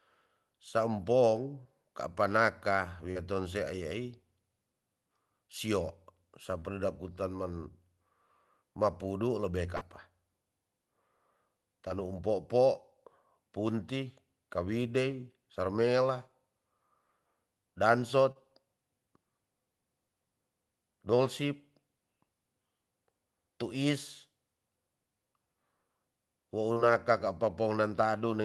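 Brief smears and small wobbles interrupt the speech at 1.63, 3.11 (after "kapa naka"), 6.59, 9.77 (after "mapudu lebe"), 11.89 (just before "um popo punti kawidei"), 18.32 and 26.73 s. Each is short concealed packet loss. Between 20 and 40 ms of audio arrived too late, and the receiver bridged each gap by extending the preceding sound before blending back in.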